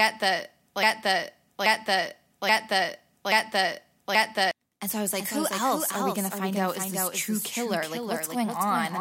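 From the very start to 4.51 s, a broken-record loop replays the same 0.83 s fragment exactly four times, likely a stalled stream resending its buffer. Unlike echo, each pass is identical and nothing decays.

After "so I was", from 5.17 s to the end, a doubled audio track follows the speech roughly 0.4 s behind and about 5 dB quieter, likely a second, slower capture path. Unlike reverb, it is one dry, full-band copy with no decay tail.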